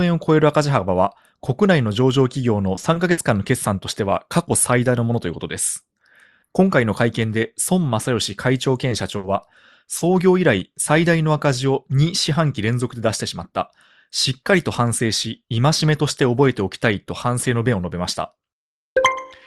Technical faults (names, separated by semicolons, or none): repeated packet loss (robotic sound); short concealed packet loss; burst of packet loss